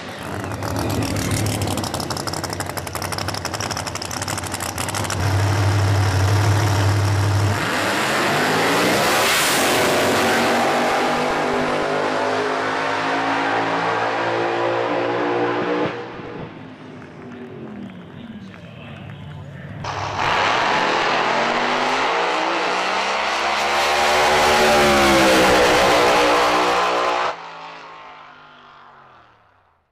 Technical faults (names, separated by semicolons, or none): DAB burbling